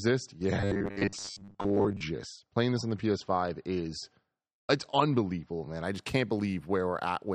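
Speech that sounds dull and smeared from 0.0 to 5.85 s, with the treble missing and strong codec artefacts, then brightens abruptly with no gap. That is an adaptive stream starting at a low bitrate, pointing to an MP3 near 36 kbit/s before the player switched to one near 128 kbit/s. From 0.61 to 2.02 s the speech also turns into a rigid, metallic buzz pitched at 100 Hz, with most of the sound held in repeats. The likely cause is robotic sound from repeated short buffers, with the last 10 ms or so looped while fresh audio was missing.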